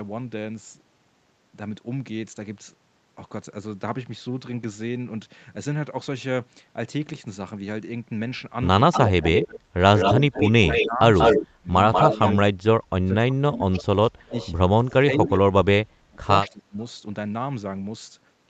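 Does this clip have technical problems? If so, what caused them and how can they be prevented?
Yes. An echo leak runs from 8.92 to 12.33 s, with a copy of the speech trailing by 188 ms at roughly the same level, and again from 13.53 to 15.39 s, delayed 238 ms and about 15 dB quieter. It is likely caused by a loudspeaker's output reaching the far microphone without the echo canceller fully removing it. On a spectrogram, each harmonic pattern repeats shifted to the right. Prevention: use a headset or retune the echo canceller's delay estimate and adaptation.

Speech suppressed in double talk occurs from 9.22 to 12.22 s, with dips of roughly 20 dB across about 1.5 s in total, and from 12.96 to 16.78 s, with dips reaching roughly 30 dB across about 3 s. The likely cause is the canceller attenuating everything while both sides spoke. The waveform shows abrupt notches in the envelope, and the spectrogram shows dimmed patches. 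Prevention: use a canceller with better double-talk detection, or headsets that avoid acoustic echo.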